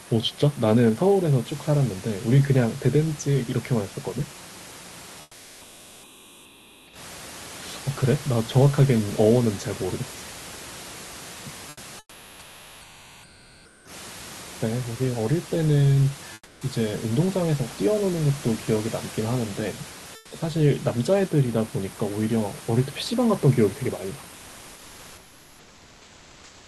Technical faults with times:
5.21-6.93 comfort noise in place of the background
11.69-13.85 comfort noise in place of the background
16.33-16.61 comfort noise in place of the background
20.15-20.31 comfort noise in place of the background

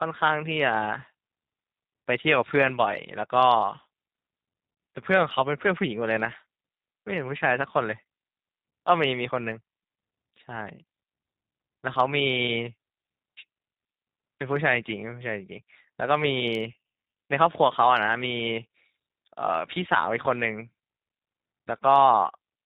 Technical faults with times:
0.00-22.65 G.729 codec

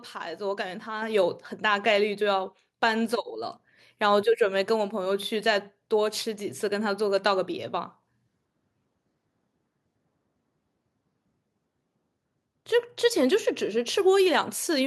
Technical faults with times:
1.02 microphone volume stepped up

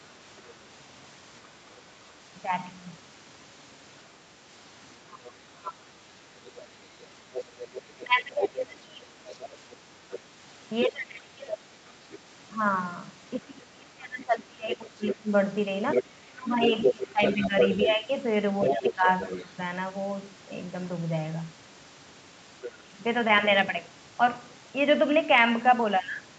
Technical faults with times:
5.05-5.85 speech suppressed in double talk
6.45-12.19 other side's voice leaking through
7.98-9.07 speech suppressed in double talk
10.86-11.59 speech suppressed in double talk
13.39-19.56 speech suppressed in double talk
14.74-19.44 other side's voice leaking through
22.61-22.78 other side's voice leaking through
22.83-22.97 speech suppressed in double talk

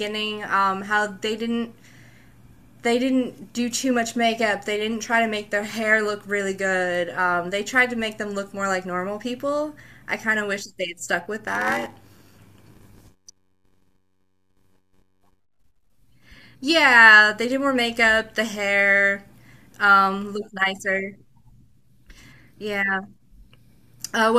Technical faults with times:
11.46-15.40 block size mismatch (padded)

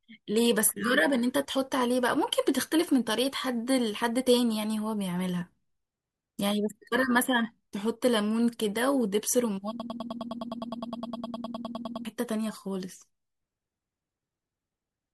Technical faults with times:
9.80-12.05 broken-record loop

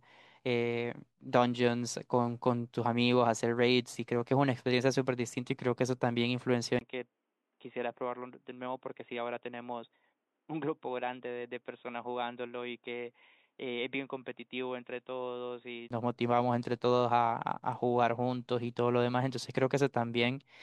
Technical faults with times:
6.79-15.90 input switched to a poorer device

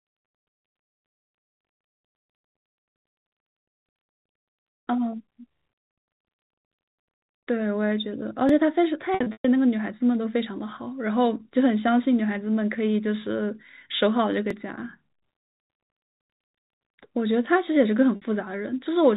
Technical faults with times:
8.49 overlapping chunks
9.14-9.45 packet loss with pitch repetition
14.50 overlapping chunks
18.16-18.22 packet loss with pitch repetition

